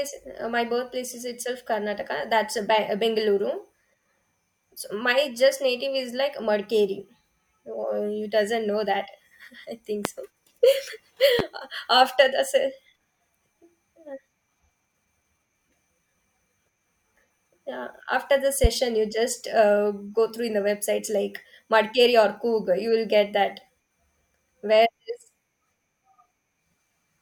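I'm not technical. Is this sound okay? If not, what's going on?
No. In this speech there are three loud pops: sharp clicks jumping out over the talking at 10.05–10.08 s, right after "I think", at 11.39–11.42 s, just before "after the", and at 18.64–18.67 s, following "yeah after the". They're likely electrical jolts from a plug, switch or static.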